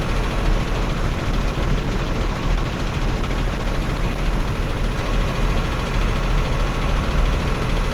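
It's an everyday sound recording, and almost the whole thing sits inside a call bitrate drop, from 0.48 s to about 7.25 s. The call's bandwidth estimate fell, so the encoder got squeezed from what sounds like around 48 kbps down to something near 14 kbps. At the bottom, which lasts about 3.2 s, Opus codes much more coarsely and chops off the top end, so the sound turns rough, watery or muffled until the rate climbs back.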